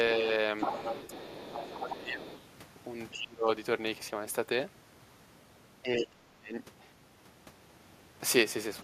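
From 0.58 to 1.51 s the other side's voice leaks through, only about 5 dB below the talker. The echo canceller likely missed loudspeaker pickup. Fainter scraps return at 1.74–1.96, 2.27–2.41 and 3.11–3.18 s. Speech is suppressed in double talk at 1.51–2.27, 3.18–3.48 and 5.88–6.54 s. The talker dips by roughly 15 to 30 dB, likely because the canceller turned down both voices at once.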